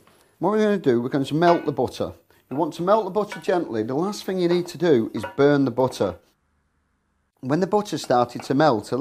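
No technical faults can be heard anywhere in the audio, and the signal stays continuous and stable throughout.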